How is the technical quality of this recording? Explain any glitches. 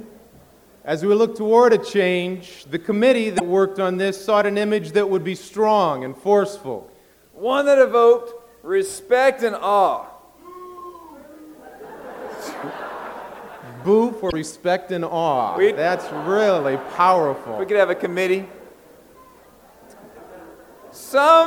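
The recording has three short glitches, all from damaged data in a compressed stream, at 3.36–3.41 s, 14.28–14.33 s and 19.40–19.45 s. Each lasts about 56 ms. In those spots some bytes of the encoded file were lost or overwritten, so the decoder misread the frames, lost sync and had to hunt for the next valid frame header before it could carry on. What you hear is a brief glitch cutting across the sound.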